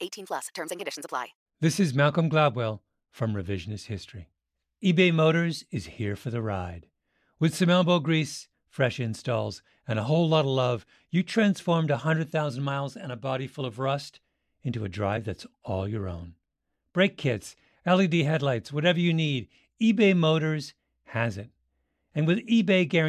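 No technical faults can be heard anywhere in the recording.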